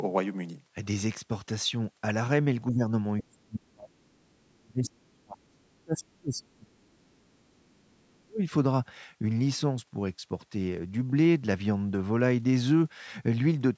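At 2.71 to 2.86 s the speech dips by about 15 dB for roughly 150 ms, an early instance of speech suppressed in double talk. With both ends talking at once, the echo canceller appears unable to tell the near-end talker apart from loudspeaker echo, so it attenuates the microphone signal as a whole. The result here is a brief sag in level rather than a full dropout.

From 3.19 to 3.23 s a short scrap of the other side's voice leaks through at about 20 dB below the speech. It is faint, consistent with residual loudspeaker echo that the canceller did not fully subtract from the microphone path.

The main event runs from 3.22 to 8.43 s, close to five seconds of suppression with the level pulled down by around 35 dB at its deepest. Across this stretch the talker's speech is ducked hard. This is again most likely the echo canceller clamping down during double talk.

Inside that stretch, two more fragments of far-end voice leak through. 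The one at 4.86 to 4.90 s is about 20 dB under the speech. The one at 5.12 to 5.17 s is much fainter, about 40 dB down. Both are likely brief residual echo bursts.

Throughout the clip the call microphone processing band-limits the audio, with nothing above 8 kHz.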